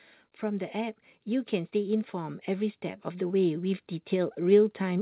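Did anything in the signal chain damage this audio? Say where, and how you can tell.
Yes. From 0.4 s to the end, the speech and background noise swell together, rising steadily rather than jumping. That is automatic gain rising in the call processing stage: the gain control judged the input too quiet and kept raising its gain.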